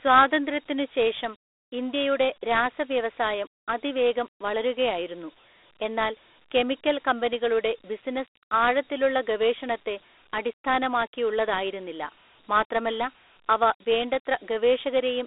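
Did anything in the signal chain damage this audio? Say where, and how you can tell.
Yes. The damage sits at the codec stage, and it runs through the whole speech clip. The band spans roughly 300 Hz to 3.6 kHz, with nothing above 3.6 kHz. A gritty hiss tracks the speech. That is Dialogic VOX ADPCM at 32 kbps, which fits 4-bit samples at 8,000 per second.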